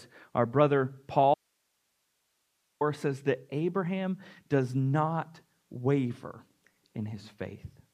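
An audio dropout to a faint residue runs from 1.34 s to 2.81 s, cutting the speech off abruptly right after "our brother" and restoring it just as abruptly before "says that". For about 1.46 s the wanted signal is gone, leaving only hiss roughly 50 dB below the speech level. The likely cause is a break upstream, such as a lost link or source, while the path after it stayed live and kept passing its own noise floor.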